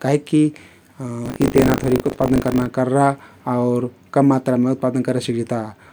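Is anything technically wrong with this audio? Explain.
Yes, there's buffer tearing in this speech from about 1.24 to 2.67 s. The app filling the playback ring buffer and the hardware draining it have drifted out of step, so they cross partway through each period. A small slice of every buffer, around a tenth, is stale audio from roughly 40 ms earlier, butted up with hard seams. You hear a robotic 50 Hz buzz riding on the speech, which points to a 20 ms buffer period.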